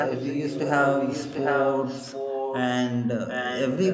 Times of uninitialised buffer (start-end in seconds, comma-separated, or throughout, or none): none